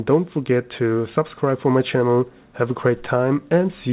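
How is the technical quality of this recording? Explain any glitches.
No glitches or faults can be heard.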